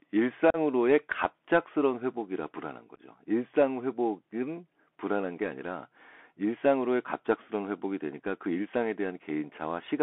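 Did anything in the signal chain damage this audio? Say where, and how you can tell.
Yes. The codec stage has narrowed and roughened the whole clip. The speech runs only from about 250 Hz to 3.4 kHz, with a granular hiss beneath it and scratchy s sounds. That is a Bluetooth CVSD headset codec: a 64 kbps one-bit up/down stream whose adaptive step can't keep pace with sharp high-frequency energy. A clean low-pass filter would narrow the band without adding that grit.

The Bluetooth link between headset and phone also shows unconcealed packet loss, at 0.50 to 0.56 s (37.5 ms missing) and 2.95 to 3.00 s (26.2 ms lost in pieces across 37.5 ms, the longest run 11.2 ms). The holes are hard-edged, with no smoothing or repeated sound bridging them, which sets this apart from concealed network loss.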